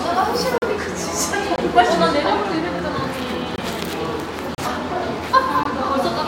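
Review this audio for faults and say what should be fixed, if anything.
Five times the system appears to have failed to fill the output buffer in time, and each missed block went out as zeros. This block of digital silence occurs at 0.58–0.62 s (40 ms), 1.56–1.58 s (20 ms), 3.56–3.58 s (20 ms), 4.55–4.58 s (34 ms) and 5.63–5.65 s (20 ms). The sound cuts to nothing and back with no fade, so each gap is a short hole.

To prevent it, give the audio callback more headroom with a larger buffer or higher thread priority, and check for invalid values before output.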